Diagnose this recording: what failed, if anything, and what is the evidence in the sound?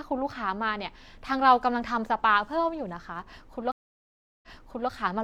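Network stream reconnect at 3.72 to 4.89 s: a 0.71 s blank waveform gap, then speech restarts 0.46 s earlier as a fresh decoder replays resent data.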